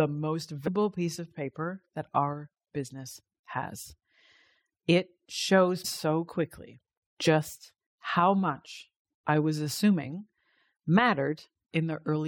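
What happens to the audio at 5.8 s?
Damaged data in a compressed stream hits the speech at 5.84 s. A short stretch of the encoded bitstream is corrupt there, whether its bytes were lost, zeroed or overwritten, so the decoder cannot read those frames properly. It drops sync and scans ahead for the next valid frame header before normal decoding resumes. The result is a very brief, harsh blip or chirp cutting across the speech at that instant.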